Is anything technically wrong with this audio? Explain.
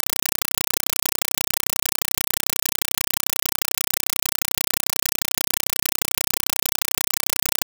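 Yes. Throughout the clip, the speech is replaced by a compressed stream played as audio. An AC-3 (Dolby Digital) bitstream reached the output as if it were ordinary PCM samples and was never decoded. Each coded frame is reproduced as a short burst of noise lasting about 5.3 ms, followed by silence where the frame is padded. The bursts repeat 31.25 times a second. The result is loud, rapid chattering static in place of the speech. The burst density fits a 256 kbps stream.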